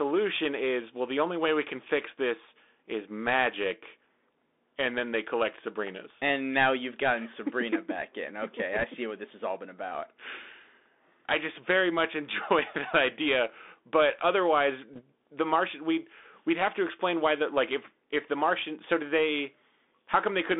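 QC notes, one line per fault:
throughout: Bluetooth CVSD headset codec. The speech sits in a narrow telephone band, about 250 Hz to 3.6 kHz, with nothing above. The codec sends a single up-or-down bit per sample and adapts its step size, which fits a 64 kbit/s CVSD link. Fast, bright sounds outrun the step and distort. S sounds turn scratchy. A grainy hiss runs under the speech. The damage is plainly audible.
8.79–8.84 s and 14.93–15.02 s: bit errors on a Bluetooth voice link. The first falls between "back in okay" and "see what this has". The second falls between "that idea but otherwise" and "the martian we'd we'd". Each is a brief rushing crackle, not a hard click. Flipped bits on the CVSD link each nudge the signal by one step that grows with the speech level, and the error fades. The rate sounds like roughly one to two percent.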